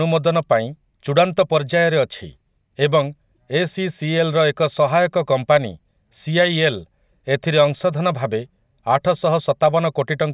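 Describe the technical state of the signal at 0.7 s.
At 0.7 s the speech signal is intact, with no audible fault at that point.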